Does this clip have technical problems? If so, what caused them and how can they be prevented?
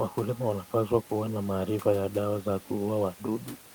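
No, there's nothing technically wrong here, just a bit of ordinary room background sitting about 21 dB under the speech, which is part of the recording space rather than anything to fix.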